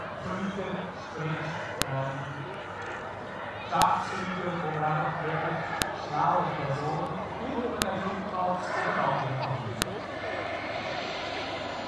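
A sharp, loud click lands at 1.82, 3.82, 5.82, 7.82 and 9.82 s, exactly every 2 s. This is a file header played as audio: each 2-second piece was joined on with its header still attached, so those few dozen bytes play as samples. Unlike dropout or underrun clicks, these snaps fall on a perfectly regular grid and hit at full force whatever the sound is doing, with no gap or smearing around them.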